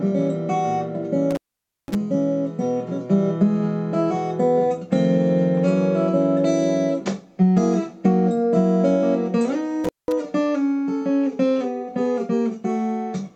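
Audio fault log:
1.31–1.95 s and 9.84–10.12 s, intermittent contact: a loose cable or plug connection opens briefly, for about 510 ms and then about 195 ms. The sound drops out or breaks up while the circuit is broken, with crackle as the contact opens and recloses, leaving faint hiss underneath.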